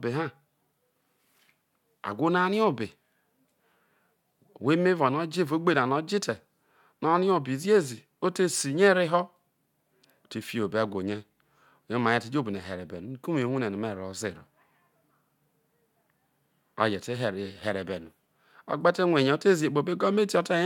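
No technical faults heard at any point in the speech.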